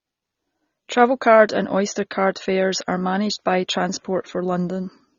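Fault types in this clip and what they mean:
AAC compression: the speech was most likely encoded with AAC-LC at a low bitrate, which fits roughly 24 kbps, so the encoder had too few bits to code each frame's frequency lines faithfully against its hearing model. To save bits it lowers the upper cut-off and drops or crudely approximates whole bands, and the damage is plainly audible throughout. The voice sounds dull and smeared, with a warbling, fizzy texture on sustained sounds and sibilants.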